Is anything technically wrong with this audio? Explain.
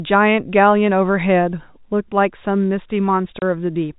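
Yes. There is one instance of packet loss filled with silence, from 3.39 to 3.42 s, near the end of the speech. A 30 ms stretch of audio is missing, which points to a single lost packet. The receiver substituted silence instead of concealing the gap, so the speech drops out abruptly with hard edges on both sides. The telephone-band G.711 coding carries no content above 4 kHz.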